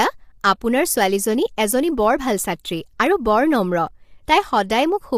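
From the start, the speech has a rough, grainy texture, with noise filling the gaps between harmonics and a thin, synthetic-sounding top band. This is likely low-delay AAC compression, AAC-ELD at a bitrate that fits about 32 kbps, where short frames resolve pitch harmonics poorly.

At 3.87 s a single sharp click cuts through, a brief vertical line across the spectrum. It points to dropped samples, with a tiny fraction of a millisecond missing, so the waveform jumps abruptly to a later value while no audible sound is lost.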